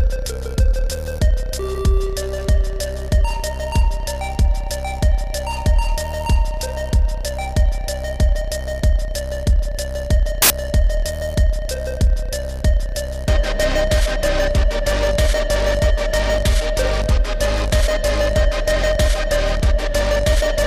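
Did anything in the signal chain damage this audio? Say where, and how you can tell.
Yes: samples built from the wrong bytes, 10.42 to 10.50 s, at the sample-format conversion stage. For about 80 ms the sound gives way to a burst of loud, harsh broadband noise. The reader misassembled each sample's bytes, so the rapidly changing low-order bits landed in the high-order positions and swamped the real signal.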